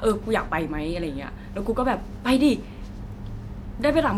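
No technical faults are audible anywhere in the recording.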